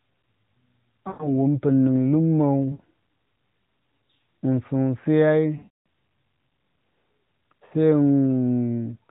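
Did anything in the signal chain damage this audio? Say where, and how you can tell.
Yes. On the radio link, AMR speech frames were lost, and the narrowband AMR decoder filled the gaps by repeating its last good pitch and vocal tract settings at falling gain. You can hear this at 1.08 to 1.35 s, 2.72 to 2.82 s, 5.58 to 5.69 s and 7.66 to 7.74 s. Each time the sound stretches into a smeared, sustained tone and sinks toward silence. The longest dropout, at 5.58 s, fits a run of about 280 ms of missing frames. After each one the audio returns briefly weak or rough.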